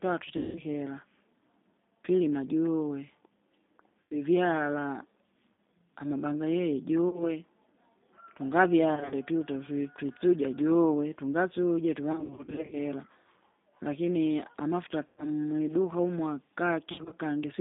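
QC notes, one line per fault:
Throughout: G.729 codec. The speech passes through a low-rate speech coder that rebuilds each 10 ms frame from a vocal-tract filter, a pitch predictor and a handful of pulses, which fits an 8 kbit/s G.729A stream. The line is held to roughly 200 Hz to 3.7 kHz, so the sound is plainly band-limited and dull. The sparse pulse excitation makes it rough and faintly synthetic.
0.37–0.60, 4.04–4.14, 5.54–5.58, 7.09–7.23, 8.95–9.14, 12.12–12.77, 15.06–15.29 and 16.92–17.14 s: VoIP packet loss concealed by the speech codec. Packets go missing and the decoder fills the gaps by repeating its last pitch and filter at falling gain. Gaps run from 40 ms to 280 ms, and the worst stretch at 12.12–12.77 s has losses scattered over 600 ms. The sound smears into a fading buzzy tone or coloured noise, and it stays weak and distorted for a short while after each gap.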